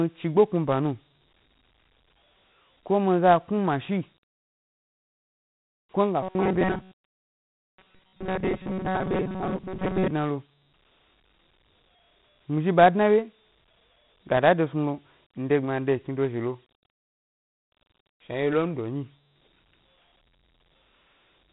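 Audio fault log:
throughout: Dialogic VOX ADPCM. A plainly audible gritty hiss trails the speech and nothing sounds above 3.9 kHz; 4-bit ADPCM at 32 kbps, which fits 8,000 samples a second.
6.23–10.12 s: robotic sound from repeated short buffers. The speech turns into a rigid metallic buzz near 188 Hz, ending before "dna lo"; likely most of the audio is replaced by repeats of a 5.3 ms buffer.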